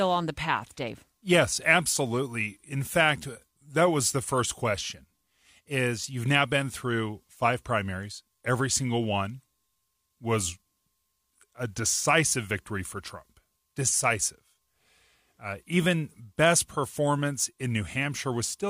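A recording of speech, with no technical fault to be heard anywhere in it. Nothing in the signal path calls for comment or correction.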